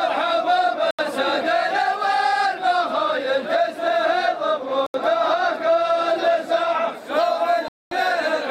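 At 0.91 s and again at 4.86 s the sound stops dead for about 80 ms, and at 7.68 s it goes silent for about 230 ms before resuming at 7.92 s. These are Bluetooth stalls, likely caused by radio interference delaying packets until the headphones' buffer ran empty. Unlike a crackle or codec glitch, each gap is a clean stretch of total silence with no noise or garble, and the audio simply carries on afterwards.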